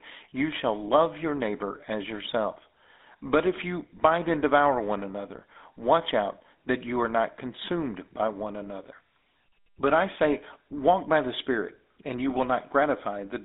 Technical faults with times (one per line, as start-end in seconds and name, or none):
0.00-13.45 GSM full-rate codec